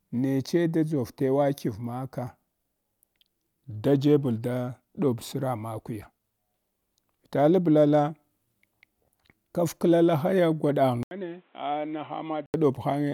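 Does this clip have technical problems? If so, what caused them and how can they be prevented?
Yes. At 11.03 s there's an 80 ms gap, then until 12.54 s the speech turns dull and boxy, with nothing above 4 kHz, roughly 10 dB quieter and new background noise roughly 35 dB below the speech, likely from the input switching to a poorer device. Lock the input device before recording.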